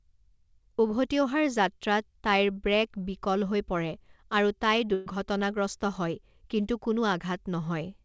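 At 4.94 s, just after "আৰু তাই", a burst of packet loss lasts until 5.08 s, about 140 ms. Unlike a plain dropout, there is no silent hole. The receiver concealed the gap by extending and fading the last sound for about 120 ms, so a smeared, decaying tail replaces the speech. When audio resumes, roughly 120 ms of speech has been skipped, heard as a jump forward. The call path's codec limits the band to 8 kHz.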